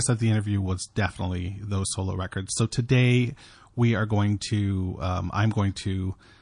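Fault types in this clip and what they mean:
MP3 compression: A lossy encoder starved of bits, likely MP3 at a rate that fits roughly 40 kbps, discards weak frequency lines that flicker between frames, so the speech sounds plainly watery and swirly, with metallic chirps on s sounds and smeared attacks throughout.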